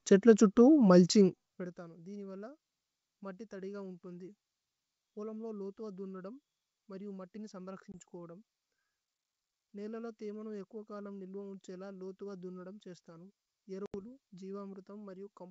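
Packet loss on an ADPCM call at 7.92–8.00 s and 13.86–14.02 s: hard-edged 20 ms and 80 ms silences, then brief distortion as the decoder's predictor and step size resynchronise. The gaps suggest roughly one and four lost packets.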